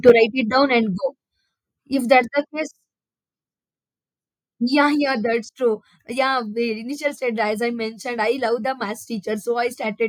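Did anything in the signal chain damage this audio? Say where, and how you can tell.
Yes. At the converter stage, microphone overload likely came from an input gain set too high, driving peaks about 4 dB past full scale between 0.07 and 0.11 s. Roughly one sample in seven is flattened there, giving those opening peaks a harsh, crackling edge.

In call processing, the microphone volume stepped down twice, likely the software reacting to loud or clipped input by cutting device gain. The level falls about 3 dB at 0.10 s, near the end of the distorted stretch, and about 2 dB more at 2.22 s, with the background dropping along with the speech.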